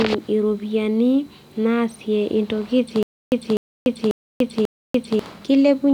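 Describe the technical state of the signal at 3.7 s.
At 3.7 s the speech is caught in a stutter with silent gaps, running from 3.03 to 5.19 s. A 250 ms fragment repeats four times, each followed by 290 ms of digital silence, every 540 ms. This likely comes from a stalled stream replaying its last buffer. The missing audio is lost.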